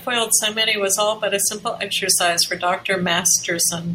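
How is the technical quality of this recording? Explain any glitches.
Nothing here glitches at all, so there's really nothing to explain on the technical side.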